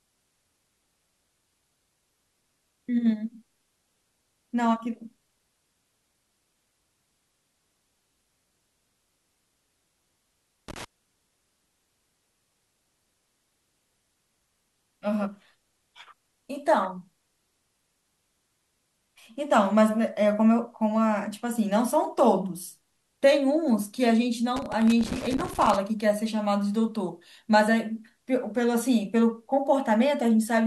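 A worn contact in the connector makes and breaks, chopping the speech signal into irregular bursts of crackle, from 10.68 to 10.85 s and again from 24.56 to 25.77 s.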